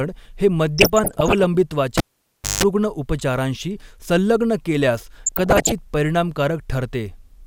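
From 0.78 to 1.44 s, weak DAB reception lets bit errors slip past error correction, at somewhat under one percent, into the MP2 data. Corrupted samples put short blips of noise in single sub-bands, and corrupted scale factors make individual sub-bands leap in level for up to a frame. This DAB burbling gives bubbling blips over the speech.

At 1.98 s a live cable is pulled and plugged in again. A pop is followed by about 0.61 s of near silence. While only the tip makes contact there is a 0.17 s burst of 50 Hz mains buzz, and a second pop at 2.63 s brings the sound back.

The same DAB burbling returns from 5.26 to 5.72 s, just after "संलग्न केल्यास". At a similar error rate, the corrupted sub-bands again flare briefly, giving bubbling blips across the speech.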